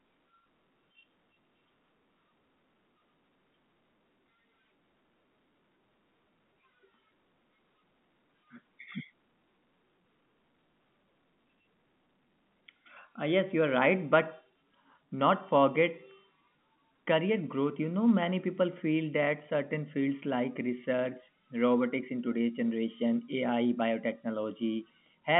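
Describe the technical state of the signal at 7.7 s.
At 7.7 s the audio is intact, with the speech carried over the normal G.711 telephone coding path and its narrow band ending around 3.7 kHz.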